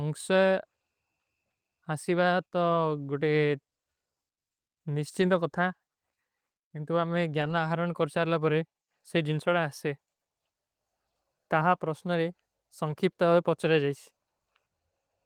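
Lost packets rebuilt from error correction at 5.21–5.23 s, 7.41–7.51 s and 12.91–12.93 s leave no gaps, but the low-bitrate copies sound briefly rougher and noisier.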